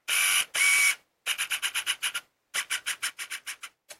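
From 3.10 to 3.92 s the audio suddenly sinks by about 6 dB and then comes back. That's likely one channel drops out, so the mono sum loses half its contribution.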